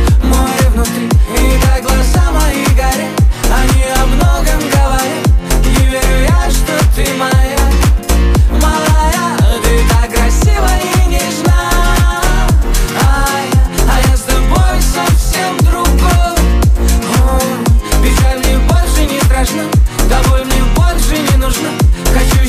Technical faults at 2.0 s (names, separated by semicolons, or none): electrical switching spike